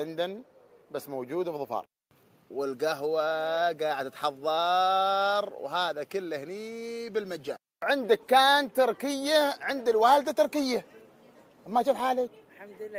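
Nothing here jumps out as a fault: no dropouts, glitches or other problems turn up anywhere in the clip.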